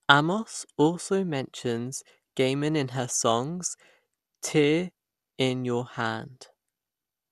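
From start to finish the speech sounds dull and plainly gurgly. Nothing comes through above 12.2 kHz, and what's left has a coarse, granular edge, which is likely MP2 compression at a low rate, around 80 kbps, starving and switching off upper sub-bands.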